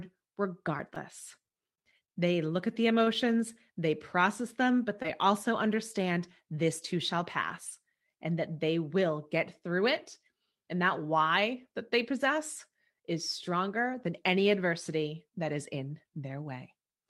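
Between 0.77 and 2.1 s the speech carries a string of brief ticks and small smears, roughly seven of them, none longer than about 20 ms, before "they look at the". These are scattered short gaps: individual packets went missing or came late, and the receiver bridged each hole by extending the preceding sound. Together they fill about a tenth of a second, around 7% of that stretch, and the net timing loses 40 ms of real audio while 12 ms is added.

Right after "they look at the", from 3.04 to 3.08 s, a sound is held a touch too long, with a slight buzz or dip rather than any audible dropout. This is a short stall from a late packet: the jitter buffer ran dry when a packet failed to arrive on time, so the receiver stretched the last sound for 22 ms until it showed up. Nothing is lost, but everything after shifts 22 ms later.

A quick smear at 5.02 to 5.06 s, just after "they process them but", blurs the sound. 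This is short concealed packet loss: 20 ms of audio never reached the decoder in time, and the receiver papered over the hole with 17 ms synthesised from the preceding sound before blending back into the real signal.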